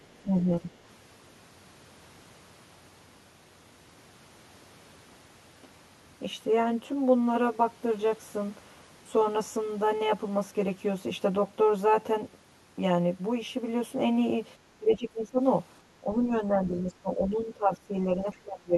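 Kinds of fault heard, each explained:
Channel delay (comb filtering): The speech sounds hollow and phasey for the whole clip. One channel runs roughly 10 ms behind the other, and the two are summed to mono. Sound common to both cancels at evenly spaced frequencies. The first notch sits somewhere near 40 Hz, and further notches repeat up the spectrum. These fixed dips give the voice a thin, tubey colour that never changes with what is said.
Speech suppressed in double talk: The talker's level dips in several places, at 0.22 to 0.71 s, 14.79 to 15.4 s, 16.01 to 16.31 s, 16.5 to 17.94 s, and from 18.22 s to the end. The drops range from a few decibels to about 20 dB, deepest near 15 s and at the end. The likely cause is an echo canceller that cannot tell its own talker from the other side and turns both down.
Other side's voice leaking through: A very faint second voice appears for a brief moment, from 18.32 to 18.38 s. 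It sits far below the main speech, roughly 35 dB down, so it registers as a tiny scrap rather than words. It lands inside the final dip. The likely cause is loudspeaker sound reaching the microphone that the echo canceller did not fully remove.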